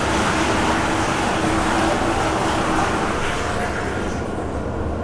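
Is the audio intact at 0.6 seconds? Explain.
Yes, the audio is intact at 0.6 seconds, with no fault present at that moment.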